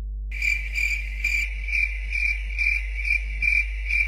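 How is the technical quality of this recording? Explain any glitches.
Quality is poor, with two faults. Mains hum runs throughout: a loud, steady 50 Hz tone with low harmonics, only a little below the sound itself, from a ground loop or nearby transformer. From 1.44 s to the end, the stream drops abruptly to a lower bitrate with no gap. The treble disappears above 11.8 kHz and turns thin, which points to a switch from roughly 96 kbit/s AAC to low-rate HE-AAC.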